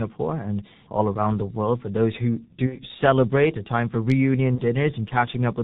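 G.723.1 codec damage runs through the whole of this speech clip. The voice is muffled and hoarse, with nothing above 4 kHz and smeared consonants, which fits a heavily compressed 30 ms-frame codec running near 6 kbit/s with a slowly updating voice model. VoIP packet loss concealed by the speech codec occurs at 2.66–2.79 s, after "those who" and before "celebrate a time for", and again at 4.55–4.64 s, just after "celebrate a time for". In each gap, the decoder stretched its last pitch and filter into a fading tone or noise instead of real sound. The first gap matches about 60 ms lost, consistent with two missing frames, and the second matches one frame of about 30 ms. Because the decoder builds each frame on the previous one, the voice stays weak and distorted briefly after each gap.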